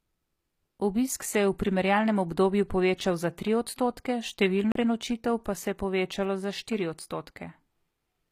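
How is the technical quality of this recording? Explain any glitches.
The recording has two audible problems: coded treble throughout and one playback skip.

Throughout the speech, the treble sounds synthesized and gritty, with lispy s sounds. This is likely HE-AAC compression, rebuilding upper bands from copied lower ones, which fits roughly 24 kbps. Unlike plain lowpassing, brightness remains but is wrong.

At 4.72 to 4.75 s, a CD skip causes a brief mute of a few tens of milliseconds, then playback resumes from a different point on the disc. Unlike a dropout, the sound jumps rather than simply pausing.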